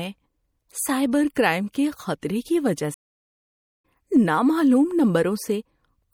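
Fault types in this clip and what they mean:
MP3 compression: The whole clip has a plainly watery, swirly quality, with the top end shaved off and the s sounds going chirpy and metallic. That's likely MP3 coding starved for bits. The encoder throws away the treble above a fixed point and drops weaker frequency detail that flickers in and out frame to frame. The amount of damage fits a low rate, somewhere around 64 kbps.
stream reconnect: At 2.94 s the speech cuts out completely for about 0.9 s, returning at 3.84 s. It sounds like the connection dropped, the player sat silent while it reconnected, and then a fresh decoder picked the stream up mid-flow. When it comes back, the speech has jumped ahead by roughly half a second, so that stretch is simply gone rather than delayed.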